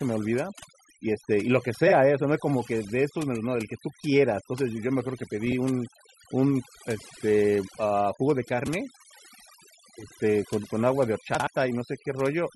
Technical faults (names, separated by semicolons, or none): overdone noise removal; frames out of order